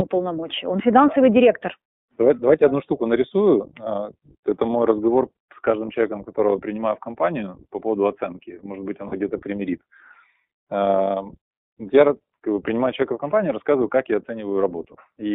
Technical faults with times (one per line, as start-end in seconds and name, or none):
0.00-15.34 iLBC codec
9.07-9.13 lost iLBC frames